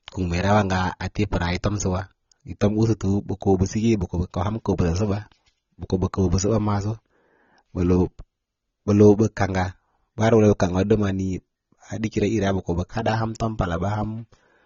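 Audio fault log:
throughout, AAC compression: likely an AAC-LC encode at a bitrate consistent with about 24 kbps, discarding everything above 7 kHz, leaving the speech dull with plainly audible coding damage.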